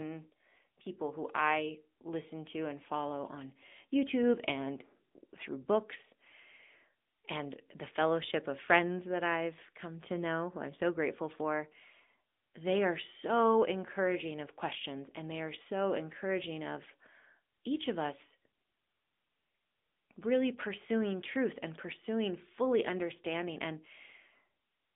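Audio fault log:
Throughout: AMR narrowband mobile codec. The speech is squeezed into a phone band of roughly 250 Hz to 3.6 kHz, with nothing above 3.7 kHz. Rebuilding each 20 ms frame from a vocal-tract model leaves a plainly audible buzzy, synthetic edge, which fits a mid-rate mode near 10.2 kbps.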